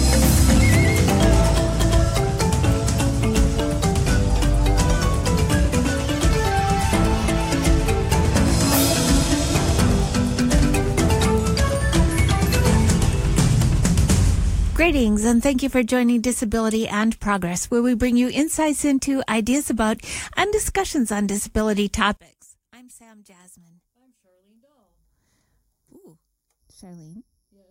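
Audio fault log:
22.17 s to the end, one channel inverted: from 22.17 s the sound collapses by about 29 dB and stays low through the clip's close. The likely cause is one stereo channel flipping polarity, so that whatever the two channels share cancels when they are summed to mono and only their difference survives. Unlike a dropout, the sound does not go silent but carries on faintly, and the sudden step at a single instant points to a wiring or processing flip rather than a fade.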